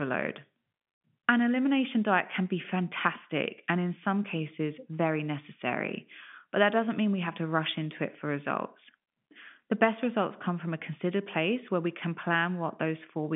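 No technical faults can be heard anywhere in the recording. The speech comes over a G.711 telephone coding path, so the line band runs from 150 Hz to 3.5 kHz and nothing is present above 3.7 kHz.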